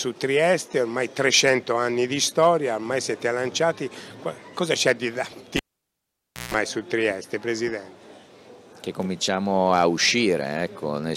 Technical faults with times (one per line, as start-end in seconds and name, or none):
5.57-6.54 cable pulled and plugged in